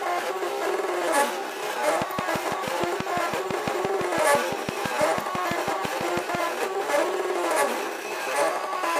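A train of clicks runs from 2.02 to 6.36 s: around thirty near-identical pulses at a steady six per second, standing roughly 20 dB above the sound, ticking through pauses too. An outside source injecting pulses, likely interference from nearby equipment, fits this.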